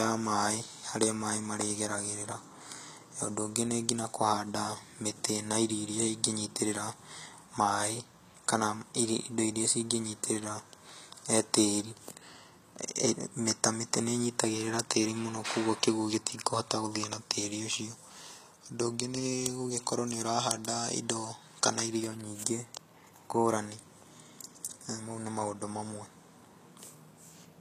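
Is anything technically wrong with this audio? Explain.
Yes. Throughout the speech there is plainly audible damage consistent with HE-AAC compression, likely at a low rate of around 24 kbps. The treble is rebuilt from copied lower bands and stops at 14.9 kHz, so sibilants sound gritty and metallic rather than simply dull, as they would with plain low-pass filtering.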